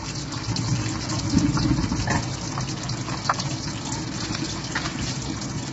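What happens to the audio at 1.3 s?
At 1.3 s, as throughout the clip, the sound is likely coded with low-delay AAC compression at a starved bitrate, around 16 kbps. Its short frames resolve fine detail poorly, so the sound turns rough and grainy, with nothing above 7.8 kHz.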